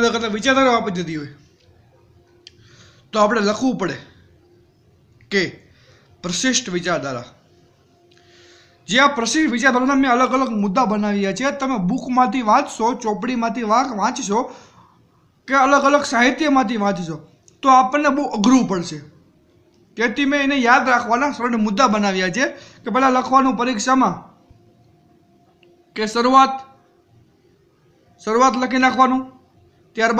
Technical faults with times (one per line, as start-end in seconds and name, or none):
none